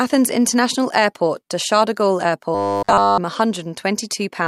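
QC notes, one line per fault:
2.55–3.19 s, robotic sound from repeated short buffers: fresh audio likely stopped arriving in time, so playback kept looping the most recent short chunk instead of moving forward, and for essentially the whole stretch the real speech is skipped. Each repeat restarts the same fragment, imposing a steady buzz at 100 Hz, which points to a 10 ms buffer. The speech turns rigid and metallic, following only the rough shape of the words.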